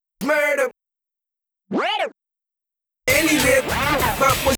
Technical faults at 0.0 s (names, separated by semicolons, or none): none